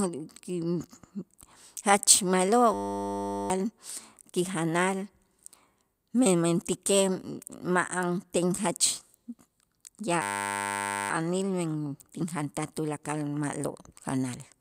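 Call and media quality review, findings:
System hang loop, 2.74–3.5 s and 10.22–11.1 s: steady 100 Hz buzz replacing speech. Driver or host stalled while hardware replayed one 10 ms ring buffer, consistent with a 10 ms buffer. Roughly 0.7 s and 1 s of speech lost.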